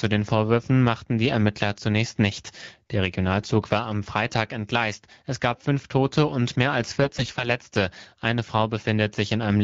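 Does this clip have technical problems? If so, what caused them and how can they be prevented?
Yes, there's one. From about 7.04 to 7.48 s you get AMR bit errors: the speech keeps roughly its pitch and loudness but goes hoarse, scratchy and a bit gargly. That's what happens when the less-protected bits of AMR frames arrive flipped on a weak radio link while the checksum on the critical bits still passes. The decoder then drives the vocal model with pulses in the wrong places and wrong pitch, gain and spectral values. The damage is on the order of a tenth of the bits, and it looks like most frames in that stretch were hit. The AMR wideband (HD Voice) codec underneath sounds like it's running at a rate that fits 12.65 kbit/s. The fix is better radio coverage, or a lower codec mode with stronger channel coding, so those bits don't get corrupted in the first place.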